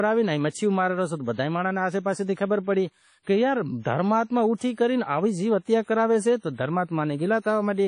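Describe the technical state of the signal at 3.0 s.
At 3.0 s the speech shows clip-wide damage from likely WMA compression. Long transform blocks spread quantisation noise over tens of milliseconds, giving a ringing, washy hiss that breathes with the speech. Nothing reaches above 10.1 kHz, fitting about 32 kbps. A plain low-pass filter would not add that hiss.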